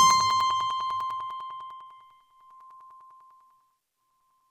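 Periodic USB or driver dropouts run from 0.10 s to 4.41 s. Every 0.1 s, something stalls the USB bus or audio driver, and a few milliseconds of sound are lost and replaced with silence, about forty gaps in all. Because each gap cuts the waveform abruptly, it produces a tick. They come ten times a second, as steady as a clock, and are heard only where the sound is present.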